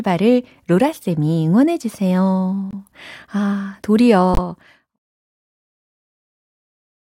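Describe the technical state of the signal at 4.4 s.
At 4.4 s the signal is just emerging from a corrupt frame muted dropout spanning 4.33 to 4.39 s, roughly 58 ms, which fits two lost compressed frames. Flipped bits left those frames undecodable, so the player substituted digital silence: the speech cuts out abruptly, leaving a hole with no smearing, and timing is preserved as audio resumes on "어 새로운". The gap sits inside an editorial fade-out running from about 4 s to 4.99 s.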